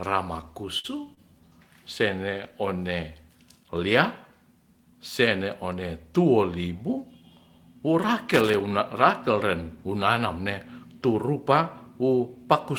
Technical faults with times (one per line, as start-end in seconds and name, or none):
0.79-0.86 short stall from a late packet
1.14-1.19 short stall from a late packet
8.34-8.60 loose connector crackle
11.05-11.36 jitter buffer speed-up